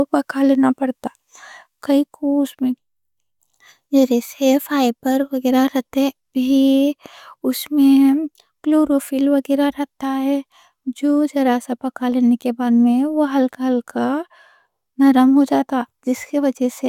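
No dropouts, clicks, distortion or other technical faults can be heard anywhere in the speech.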